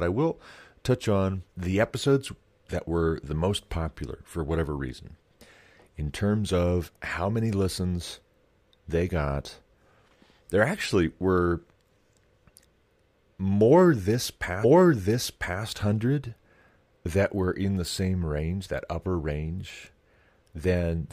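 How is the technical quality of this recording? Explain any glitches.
There is one glitch: a stream segment repeated. At 14.63 s, just after "more this", the player queued the same segment twice, so about 1.0 s of speech replays, ending at 15.63 s, with a small blip at the jump back.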